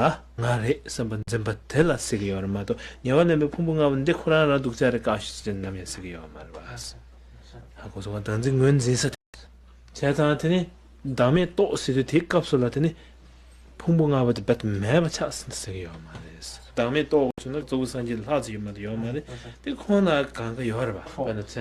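Digital broadcast dropouts at 1.23, 9.15 and 17.31 s cut the sound for 48, 192 and 72 ms while bad frames are muted, leaving blank full-height gaps on a spectrogram.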